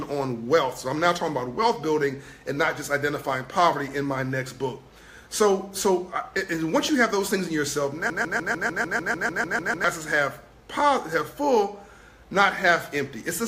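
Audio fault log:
6.89 to 6.91 s, loud pop: A single sharp pop cuts in on top of the sound, which keeps going underneath. It stands a little above the surrounding level. It is over in about two hundredths of a second. A sudden voltage step or pulse entered the signal path, likely from a plug, a switch, static discharge or a driver glitch. The later circuits shaped that pulse into a short burst, so it lands as one hard click.
8.10 to 9.84 s, broken-record loop: A fragment about 0.15 s long plays back to back, identical each time, for nearly two seconds. It repeats twelve times before normal playback returns. The player, encoder or stream likely stalled and kept resending the last piece it held. The audio that belonged in that stretch never arrives. That exact, rapid repetition gives the stuck, stuttering sound.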